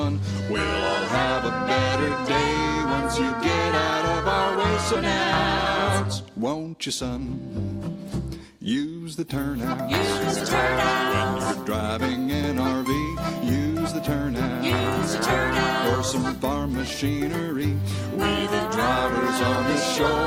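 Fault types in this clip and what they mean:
jitter buffer speed-up: 6.05 to 6.75 s, short pitch-period slices are cut to drain surplus buffered audio, so it plays at 111% speed with unchanged pitch.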